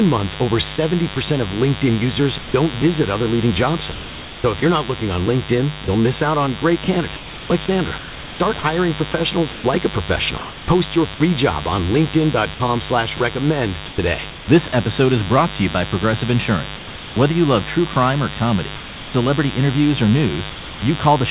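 A raspy mains buzz runs the whole way through, built on 50 Hz harmonics and sitting only about 10 dB under the speech. It sounds like switching spikes from a dimmer or rectifier getting into the line.

Then the sound is chopped by the voice detector, likely because the sender kept switching between sending and not sending. From 0.76 to 2.54 s, after "month over", about 200 ms is replaced with comfort noise. From 3.92 to 11.2 s, after "visit other leading job", about 1.9 s goes, and it returns at "job on". There's 420 ms lost from 12.54 to 14.72 s and 800 ms from 16.76 to 19.14 s, ending before "interviews or".

Finally, from 20.5 to 20.82 s, there's sound dropped by the voice detector, likely because it mistook quiet speech for background. A 320 ms stretch disappears entirely under steady comfort noise.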